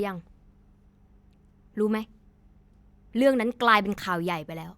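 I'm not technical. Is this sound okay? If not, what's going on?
Yes, no faults can be heard.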